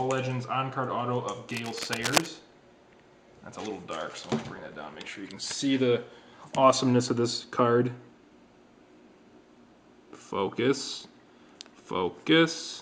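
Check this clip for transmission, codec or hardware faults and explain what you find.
One hardware fault stands out. Cable scratch noise runs from 1.50 to 2.28 s: dense, uneven bursts of scratching and rustling sit over the audio, only a little quieter than the main sound. The likely cause is a worn cable, connector or control being moved, its contact resistance jumping erratically.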